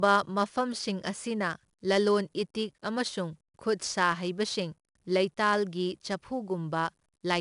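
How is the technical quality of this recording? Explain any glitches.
The recording has clearly audible codec damage for its whole length. Throughout the speech, 4-bit ADPCM compression is at work. Each sample is coded as a coarse 4-bit step from a predicted value, so the error follows the signal, giving a gritty hiss on louder passages and roughened attacks. Nothing is present above 10.6 kHz, which fits a sample rate of around 22 kHz.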